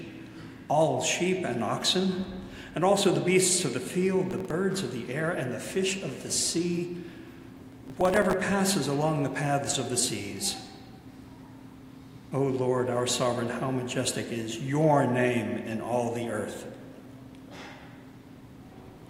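Gritty tearing crackle rides on the sound from 4.31 to 4.65 s and again, longer, from 7.72 to 8.33 s. This is processor overload crackle: a run of missed deadlines on very short buffers, around a millisecond and a half each, replays hard-edged scraps of old audio.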